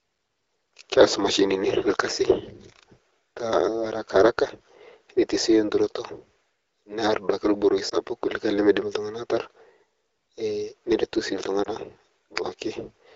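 Speech clip with two lost AMR speech frames, brief dips and warbles at 7.89–7.94 s and 11.64–11.69 s, each consistent with one dropped 20 ms frame concealed by the decoder. The speech carries the light coloring of AMR wideband (HD Voice) coding, which fits a 12.65 kbit/s rate.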